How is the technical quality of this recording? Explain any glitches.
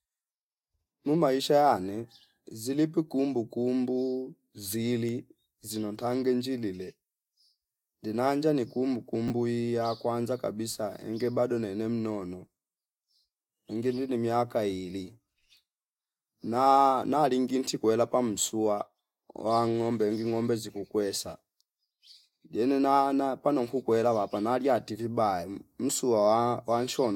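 There's one glitch worth flagging, a brief chunks-out-of-order moment at 9.28 to 9.30 s. A 10 ms slice of the speech turned up one chunk late, so it plays after the slice that should have followed it. Nothing actually goes missing, but the reshuffle leaves three hard joins packed into that tiny window. You hear it as a quick jumbled flicker.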